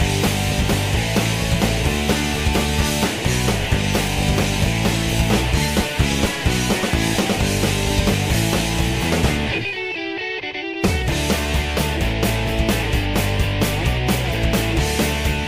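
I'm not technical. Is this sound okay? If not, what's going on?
Yes, it sounds fine; nothing wrong can be heard.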